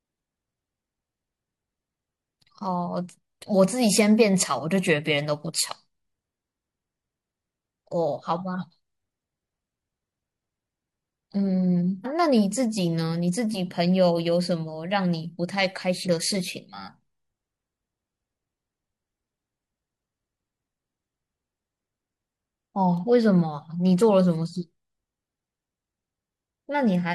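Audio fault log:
12.01–12.06 s and 16.02–16.08 s, damaged data in a compressed stream: short glitches as the decoder misreads corrupted frames and loses sync, visible as abrupt waveform breaks.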